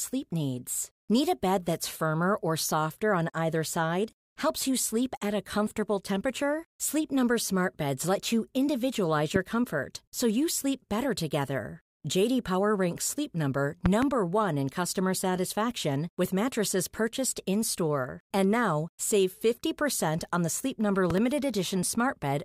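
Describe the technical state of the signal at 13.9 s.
At 13.9 s the signal carries a loud pop: two sharp thumps in quick succession between 13.86 and 14.05 s, peaking well above the speech, around 15 dB louder, while the speech carries on underneath. The likely cause is a sudden voltage step or pulse, such as a plug being moved, a switch, a static discharge or a driver glitch, entering the chain and being shaped by the circuits after it into that double transient.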